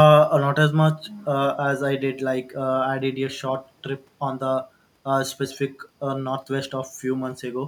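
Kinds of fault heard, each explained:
No technical faults are audible anywhere in the speech.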